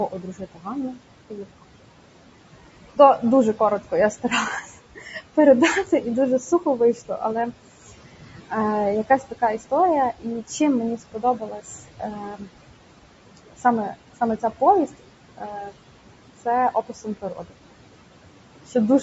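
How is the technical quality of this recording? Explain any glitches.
The recording is compromised by processing faults rather than by the room: the speech is grainy and coloured throughout, parts of it are pulled down in level, and there is one brief dropout.

Noise suppressor artifacts run through the whole clip. Between phrases the background sinks by about 18 dB and then swells back under the speech. That pumping comes from the suppressor estimating steady noise band by band and attenuating those bands frame by frame. The room noise it is working against sits about 15 dB below the speech.

The voice also sounds rough and granular, with a hiss-like fill between its harmonics and a top end that feels artificial. The band stops at 8 kHz, in line with the call's microphone path. That texture likely comes from low-delay AAC compression, AAC-ELD, at a rate that fits about 32 kbps. Its very short frames resolve pitch harmonics poorly and are expensive in bits, so the damage is plainly audible at that rate.

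Speech cut by the noise suppressor occurs from 0.11 to 1.64 s, 2.94 to 7.22 s, 9.22 to 12.48 s, 13.37 to 15.72 s and 16.45 to 17.54 s. Within these stretches, soft consonants, word endings and quieter syllables are swallowed, dropping by up to about 17 to 18 dB. The suppressor mistook them for background, so they were turned down along with it. Across all five stretches, somewhere around three and a half seconds of speech is affected, most heavily in the second and third.

AAC frame loss with concealment appears at 5.11 to 5.14 s, inside the second cut stretch. It is heard as a short smeared, noisy patch, about 20 ms long, where the sound loses definition. This points to a single lost frame. The decoder patched the gap by rebuilding the last good spectrum with altered phase and interpolated energy, and the gap was short enough that no fade to silence occurs.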